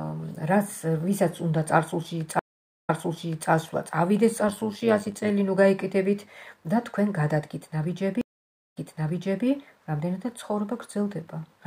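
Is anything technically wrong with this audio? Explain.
Yes, there are two kinds of problem here.

At 2.39 to 3.51 s and again at 8.21 to 9.46 s you get a stream reconnect. The connection dropped, the player went quiet for about 0.49 s and then 0.55 s, and a fresh decoder picked up mid-stream. Each time it rejoins a bit early, by 0.63 s and 0.71 s, so you hear a short stretch repeat right after the gap.

From 4.48 to 5.30 s there's overlap-add ripple. The audio was split into windowed frames and rebuilt with an overlap that doesn't sum to flat gain, so the level pumps by about 6 dB once per frame. At around 100 Hz that comes across as a rough, buzzy, robotic tremolo over the sound.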